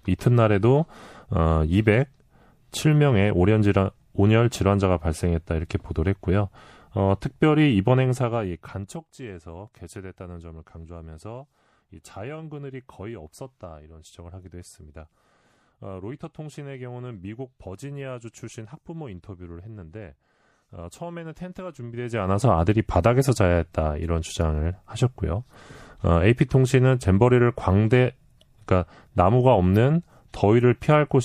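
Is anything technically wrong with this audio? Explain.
Yes, there's MP3 compression damage running through the whole speech clip, and it's plainly audible. The sound is likely from an MP3 encode at a low bitrate, which fits something around 64 kbps. Short on bits, the encoder chops the treble at a fixed point and drops quieter frequency detail, which flickers in and out from frame to frame. That gives a watery, swirly texture, metallic chirps on s sounds, and smeared consonant attacks. The gradual level rides, like a fader being moved, are separate and aren't part of the damage.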